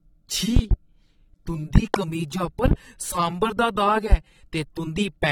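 The whole speech clip shows plainly audible damage that likely comes from AAC compression. Nothing is present above 17.4 kHz. The sound is dull and smeared, with a warbling texture. This points to AAC-LC at a low bitrate, around 32 kbps.

Loud pops arrive at 0.56 to 0.75 s, 1.76 to 1.98 s and 2.66 to 2.75 s. Each is a quick pair of sharp pops, about 20 dB above the speech, or about 25 dB in the second. A voltage pulse is the likely cause. The speech continues underneath.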